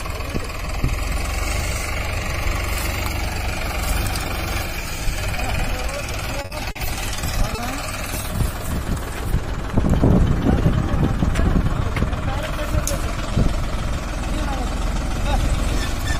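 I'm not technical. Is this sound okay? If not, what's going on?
No, there are a couple of hiccups, both from the audio arriving late over a network connection.

From 6.41 to 6.86 s you'll hear repeated stalls, a stutter. The receiving end kept running out of audio to play, four times in under half a second. Each time it filled the wait by continuing the last bit of sound, about 130 ms in total, the longest hold 50 ms. That's nearly a third of that stretch. Nothing is lost, but the sound drags and catches there.

Then at 7.55 to 7.59 s there's a short stall from a late packet. One chunk of audio showed up about 30 ms behind schedule, so the player held the previous sound for roughly 30 ms until it arrived, then carried on from the same spot. It's a brief smear or slight buzz rather than a gap, and again nothing is missing.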